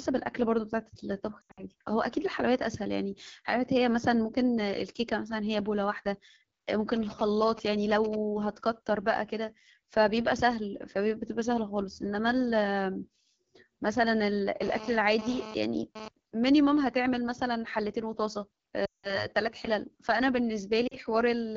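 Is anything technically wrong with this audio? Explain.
Yes. Several faults are audible.

Throughout, the speech carries AMR wideband (HD Voice) codec damage. The codec models the voice with pulses through a vocal tract filter and fills the top band with shaped noise. At this low rate, which fits the 8.85 kbit/s mode, the voice sounds rough and raspy.

Lost AMR speech frames occur three times. From 1.42 to 1.65 s, about 140 ms is lost across 160 ms, with the longest gap 80 ms. From 18.85 to 19.26 s, about 180 ms is lost. At 20.87 to 20.96 s, about 40 ms is lost. Each time, the decoder repeats the last good pitch and filter settings with falling gain. The sound drops to near silence within two frames, then returns weak or rough.

GSM signalling bursts run from 6.96 to 8.15 s. A nearby 2G phone sends short groups of radio bursts, and the audio circuit rectifies them. The result is a galloping dit-dit-dit of brief 217 Hz buzzes, roughly 10 dB below the speech.

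GSM phone buzz follows from 14.62 to 16.08 s. The phone is transferring data, so its 217 Hz burst rate is rectified into a hard, harmonic-rich buzz. It sits about 12 dB below the speech, comes and goes, and has no relation to the voice.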